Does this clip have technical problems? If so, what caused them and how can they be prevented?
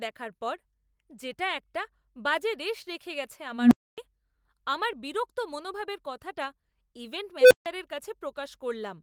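Yes. An unstable filter's recursion ran away at 3.52–3.98 s and 7.41–7.66 s, swelling a low tone (near 200 Hz, then 500 Hz) into clipping before brief dropouts. Prevent this by checking that filter poles stay inside the unit circle before applying new coefficients.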